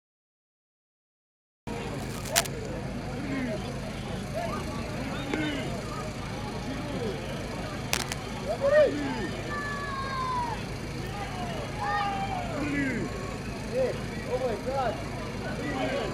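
The recording began late, a cut-off start: digital silence runs to 1.67 s, where the audio enters abruptly mid-sound with no natural attack. A likely worn cable or connector being disturbed causes cable scratch noise, dense rustling bursts at about the same level as the sound, from 1.94 to 2.47 s and again from 7.91 to 8.16 s.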